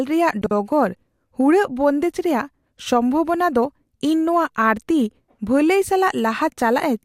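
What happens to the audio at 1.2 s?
Nothing goes wrong at 1.2 s; the speech carries on intact through that moment, with no dropout, click or distortion.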